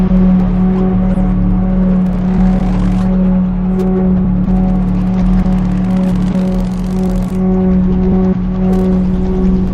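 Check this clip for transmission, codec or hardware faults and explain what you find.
No transmission, codec or hardware faults can be heard anywhere in the recording of sounds.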